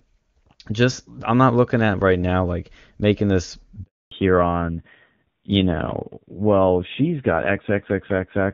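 The speech comes through clean and wideband at first, the way HD Voice sounds at its top rate, with faint or no codec damage. Right after "now like making this", at 3.83 s, there's a handover gap: the call is moved from one network to another and no frames arrive during the switch. The sound fades out within a few tens of milliseconds and stays silent for 280 ms, until 4.11 s. Whatever was said in that window is simply gone.

When the sound returns at 4.11 s, it has dropped into a fallback to narrowband that lasts to the end of the clip. Nothing above 4 kHz survives, so the voice loses its air and crispness and sounds muffled and a bit gritty compared with the opening. The roughness points to a low-rate narrowband AMR mode, in the region of 7.4 kbit/s, rather than a simple filter.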